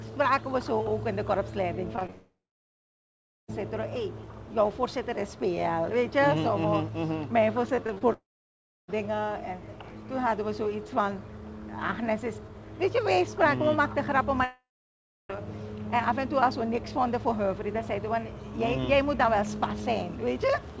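At 1.96 to 1.99 s, 1.99 to 2.03 s and 2.07 to 2.10 s there is short concealed packet loss: about 20 ms went missing each time, and the receiver patched each hole by extending the previous sound. These are heard as quick smears or wobbles. On a spectrogram they show as brief columns where harmonics run flat instead of moving.

From 2.10 to 3.50 s a long network dropout follows, likely from packets that never arrived. The last sound carries on as a fading buzz, then about 1.1 s of near-silence. The waveform collapses to a flat line before the audio resumes further on.

Between 7.76 and 8.03 s, repeated packet loss gives a choppy, robotic quality. Four gaps, the longest 24 ms, were filled by continuation, covering about 28% of that stretch. A spectrogram shows a row of short, smeared stripes chopping through the sound.

Two more long network dropouts, again likely lost packets, sit at 8.13 to 8.90 s and 14.44 to 15.37 s. 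Each decays from a brief buzz into about 0.66 to 0.67 s of silence, seen as blank vertical bands. Throughout, the spectrogram shows nothing above 8 kHz, which fits a wideband call codec.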